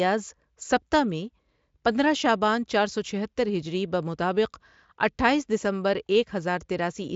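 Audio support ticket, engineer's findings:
No faults found in this clip.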